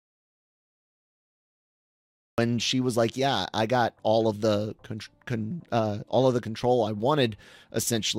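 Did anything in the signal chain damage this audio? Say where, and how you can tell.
Yes. An audio dropout to silence runs from the start to 2.38 s: silence with no room tone, and speech enters abruptly at "she was like". The input was likely lost at the device or link while the recorder kept writing zeros.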